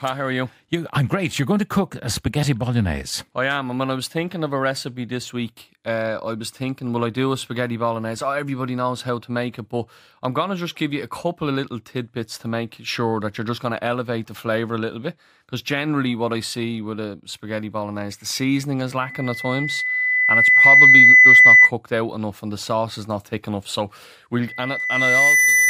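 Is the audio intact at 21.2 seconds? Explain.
No. At 21.2 seconds the clip is near the end of a loudspeaker feedback squeal that runs from 19.01 to 21.71 s, starting after "bolognese the seasoning is" and ending before "out enough and the". The microphone is re-amplifying its own loudspeaker, and the loop gain at 2 kHz exceeds one, so a pure tone swells over roughly two seconds to about 15 dB above the speech. A spectrogram shows a bright horizontal line at 2 kHz. The waveform's envelope bulges steadily.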